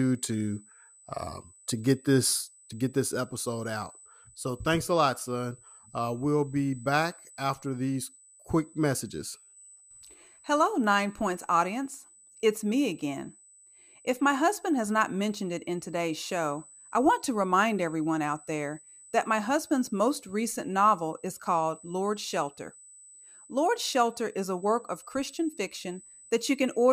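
From start to finish, a USB whine sits under the speech as a fixed-pitch tone at 8 kHz, roughly 25 dB below the speech. It comes from the bus drawing current in 125-microsecond microframes, which leaks through power or ground into the audio path. Its high, unwavering pitch at exactly 8 kHz separates it from mains hum at 50 or 60 Hz, and from a 1 kHz whine tied to full-speed 1 ms frames.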